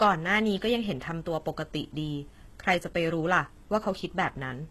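HE-AAC compression runs throughout this speech, likely at a very low bitrate around 16 kbps. Only the lower spectrum is properly coded; the treble is copied upward from lower bands, so sibilants sound gritty and lispy, with nothing above 12.3 kHz.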